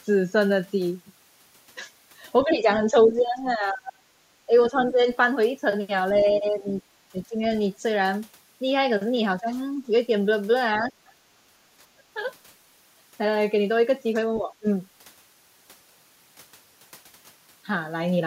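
A speech recording in which the talker's voice repeatedly dips in level during stretches where both ends seem to be talking: 2.44 to 5.0 s, 6.4 to 7.42 s, 9.4 to 9.52 s, 10.8 to 12.19 s and 14.39 to 14.65 s. The drops reach about 20 dB at worst and about 10 dB in the milder spots. This is likely speech suppressed in double talk, the echo canceller ducking its own talker because it cannot separate the talker from loudspeaker echo. The other side's voice leaks through faintly at 4.8 to 4.92 s and 6.21 to 6.81 s, about 20 and 25 dB below the speech. It is a second, distinct voice under the talker, not a repeat of the talker's own words, which points to residual loudspeaker pickup rather than a delayed echo of the talker. Separately, the room background itself is gated by the echo canceller at 11.5 to 11.66 s, dipping about 9 dB for roughly 150 ms and then returning. Because the ambient noise floor drops along with everything else, this is suppression clamping the whole microphone, not a gap in the talker's speech.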